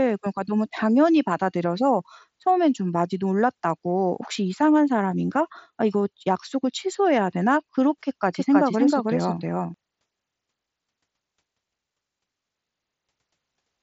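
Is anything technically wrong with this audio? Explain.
Yes, there's a doubled audio track from 8.34 to 9.74 s. A second, equally loud copy of the speech trails about 300 ms behind, dry and full-band, switching on and off abruptly. It's likely a slower second capture path mixed in, all over the mSBC-limited 7.7 kHz band.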